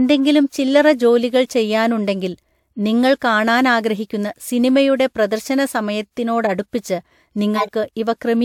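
A corrupt frame was decoded from 6.44 to 6.51 s and again from 7.55 to 7.69 s. Flipped bits misplaced energy across frequencies, producing brief glitches, the second longer and louder.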